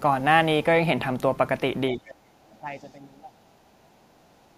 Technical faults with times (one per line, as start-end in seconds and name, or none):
1.93-2.10 speech suppressed in double talk
2.08-2.14 other side's voice leaking through
2.43-2.91 other side's voice leaking through
2.61-2.66 speech suppressed in double talk
2.97-3.29 speech suppressed in double talk
3.35-4.58 other side's voice leaking through